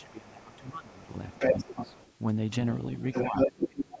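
From 0.0 to 0.3 s a faint second voice, about 30 dB below the main speech, sits under the talker. This is the other side's voice leaking through, likely loudspeaker echo that the echo canceller failed to remove. It returns at roughly equal level from 0.96 to 2.13 s, and from 2.98 to 3.81 s it is about 5 dB louder than the speech. Unlike background chatter, it appears as a second voice and not as room noise.

Speech suppressed in double talk runs alongside these stretches. From 0.0 to 1.09 s the main speech is pushed down by as much as about 20 dB for roughly a second, likely because the canceller could not separate the talker from the echo and attenuated everything. Shorter dips follow at 1.53 to 1.69 s (about 5 dB) and 1.86 to 1.92 s (about 10 dB). The deepest dip, about 25 dB, lasts from 3.28 s to the end. Unlike a codec dropout, these dips happen while the far side is playing on the loudspeaker.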